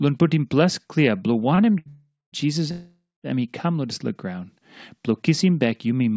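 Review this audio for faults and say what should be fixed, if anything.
At 1.79 s the sound catches and holds for about 70 ms, a brief smeared sustain with a faint buzz before it carries on. This is a short stall from a late packet. The packet arrived after its playout time, the jitter buffer ran dry, and the receiver stretched the last sound until the packet came. Nothing is lost, but everything after is 70 ms later. A slightly deeper jitter buffer would absorb this.

From 1.89 to 2.35 s, and again from 2.71 to 3.27 s just before "he come lodis la", the audio turns into a fading buzz and then drops out completely, for about 200 ms and 210 ms respectively. Playback then resumes where it stopped. These are call audio freezes, likely caused by packets delayed in transit that emptied the jitter buffer for 436 ms and 523 ms, so a gap was inserted rather than audio lost. Fixing the network delay spikes, or using adaptive buffering that grows before such bursts, would prevent them.

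The G.722 call path at 64 kbps accounts for the absence of content above 8 kHz, which is expected for that codec.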